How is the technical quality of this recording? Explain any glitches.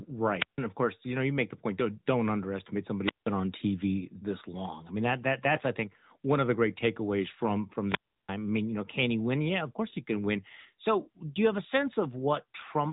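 The recording is noticeably degraded. The speech is band-limited and has a synthetic coloring throughout, and there are three short dropouts where the sound cuts out.

The whole clip sounds boxy and buzzy, with consonants dulled and a synthetic edge on the voice. That is the AMR narrowband mobile codec. The signal was carried at telephone bandwidth, so nothing above about 3.8 kHz survives. Speech was rebuilt from a vocal-tract model excited by sparse pulses. The artefacts, plainly audible here, fit a mid-rate mode around 10.2 kbps.

At 0.39 to 0.59 s, 3.04 to 3.30 s, and 7.84 to 8.36 s, the sound swells briefly into hiss and then drops to near silence. These are wireless microphone squelch dropouts. The radio link faded, and the receiver's squelch muted its output. The first gap lasts about 157 ms before "of course you know". The second, about 177 ms, follows "point don't don't underestimate". 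The longest, about 338 ms, falls between "the great takeaways from" and "I mean you know".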